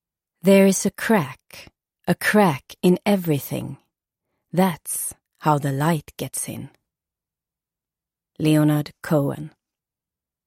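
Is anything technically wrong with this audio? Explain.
No, nothing in this audio stood out as technically wrong on listening.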